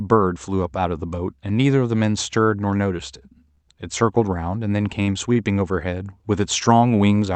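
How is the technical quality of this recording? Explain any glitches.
The speech carries three brief stalls where a sound hangs on too long, heard through a call codec path whose top end stops at about 8 kHz.

Short stalls from a late packet, at 3.51–3.59 s, 5.02–5.09 s and 5.33–5.38 s: each time the jitter buffer ran dry, the receiver stretched the last sound by roughly 56, 50 and 25 ms until the packet arrived, so nothing is lost but a sound drags with a slight buzz or dip.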